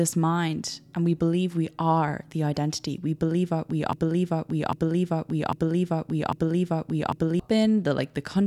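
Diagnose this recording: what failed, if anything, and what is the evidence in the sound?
A broken-record loop hits this speech at 3.93 s, just after "believe we". A fragment of about 0.80 s repeats four times, back to back, until 7.40 s. Each pass is identical. The stall likely occurred in the playback or streaming buffer. The player stopped receiving fresh audio and kept replaying the last chunk it held. Whatever should have been heard in those three and a half seconds is gone.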